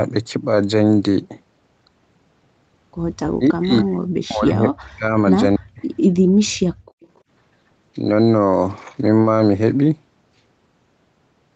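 Speech suppressed in double talk at 3.26 to 5.16 s and 5.57 to 5.81 s: the talker's speech sinks by roughly 40 dB in pieces, likely because the echo canceller confused it with loudspeaker echo. Background gated by the echo canceller at 6.73 to 7.02 s: room sound drops by about 35 dB for a moment while the canceller clamps the microphone. An echo leak follows at 7.02 to 7.2 s, a faint copy delayed by 280 ms and around 35 dB below the speech, likely residual loudspeaker pickup the canceller missed.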